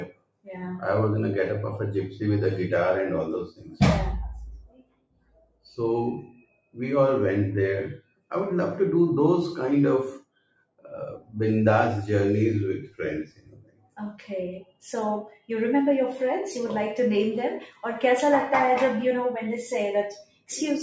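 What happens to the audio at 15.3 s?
At 15.3 s the sound is near the end of a stretch cut by the noise suppressor, running from 12.86 to 15.50 s. The suppressor treats held or fading material as noise and pulls it down by up to about 21 dB, for roughly a second and a half in total, while sudden onsets still come through. Unlike a dropout, the sound never goes silent; it sinks and thins.

This sits within a noise suppressor applied to music or sounds across the whole clip. Its gain keeps shifting by around 15 dB, so sustained parts and tails pump and flutter. A simple level fade would be smooth, but this gain moves with how steady the sound is.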